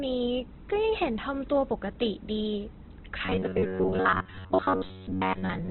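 Right from the start the whole clip has that Opus compression sound. The speech is heavily damaged, with nothing above about 4.2 kHz, so it's narrowband and boxy, and the tones come out grainy and rough rather than swirly. That's likely Opus running in its CELT music mode at a very low rate, something around 12 kbps judging by the damage, where the encoder fills starved bands with folded or noisy energy.

Then at 3.25 s, and all the way to the end, the speech turns into a robotic sound from repeated short buffers: a stiff metallic buzz at about 94 Hz that still roughly tracks the speech's shape. New audio was likely arriving too seldom, so playback kept looping the last chunk. A 94 Hz buzz fits a chunk of roughly 11 ms, and most of the real audio in that stretch is skipped.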